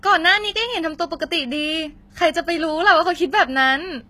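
Throughout, likely HE-AAC compression at what sounds like about 20 kbps rebuilds the treble instead of coding it, leaving plainly gritty, metallic highs and nothing above 14.9 kHz.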